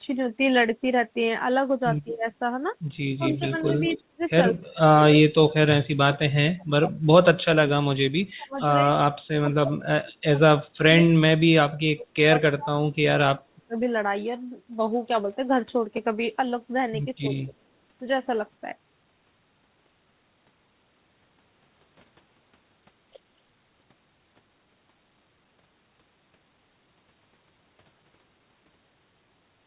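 An echo canceller that likely could not tell the near talker from loudspeaker echo during double talk turned both down, causing speech suppressed in double talk. The speech dips by about 20 dB at 2.04 to 2.25 s and by about 10 dB at 3.18 to 3.53 s. Long stretches from 3.97 to 8.89 s and from 9.4 to 13.77 s dip, dropping as far as about 40 dB. A smaller dip of about 15 dB follows at 17.2 to 17.54 s. Overlapping those periods, an echo leak, likely residue the far end's canceller failed to remove, returns a delayed copy of the voice. From 3.31 to 3.99 s it trails by 215 ms at about 20 dB below the speech. Fainter scraps follow at 8.58 to 8.66 s (223 ms, about 30 dB down) and 9.49 to 9.53 s (224 ms, about 35 dB down). Across the call path, the audio is band-limited at 4 kHz, which fits a G.711 narrowband codec.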